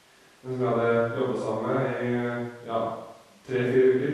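From the first moment to the end, the speech sounds dull and gurgly, with a granular edge. That's likely MP2 compression starved of bits. The encoder splits the audio into 32 sub-bands and shares out a tight bit budget, so upper bands drop out and flicker back while the surviving ones get coarsely quantised. The damage is plainly audible, which fits a rate somewhere around 80 kbps.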